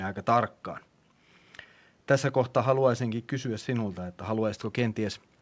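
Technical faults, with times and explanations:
No technical faults can be heard in this speech, so there are no times or explanations to give.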